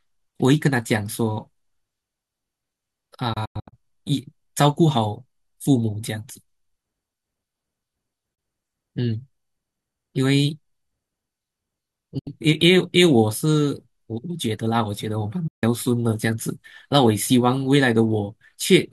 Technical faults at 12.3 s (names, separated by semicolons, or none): digital broadcast dropout